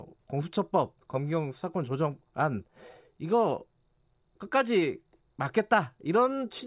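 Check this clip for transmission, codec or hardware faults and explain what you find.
No transmission, codec or hardware faults are audible anywhere in this speech recording.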